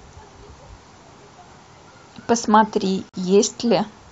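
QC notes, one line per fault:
3.09–3.14 s, gap at a join of encoded pieces: a 44 ms silence cuts into the running speech, its edges smeared by the codec, and the speech resumes exactly where it broke off. Separately encoded pieces were joined without trimming, so one piece's padded final frame and the next piece's start-up delay both remain as dead air. These joins recur every 4 s, so only this one falls within the clip.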